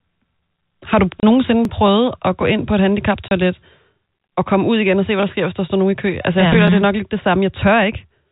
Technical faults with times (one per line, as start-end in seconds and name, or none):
1.20-1.23 packet loss filled with silence
1.65 overlapping chunks
1.86 chunks out of order
3.28-3.31 packet loss filled with silence
4.16 overlapping chunks
5.19-5.23 chunks out of order
6.52 chunks out of order
6.68 overlapping chunks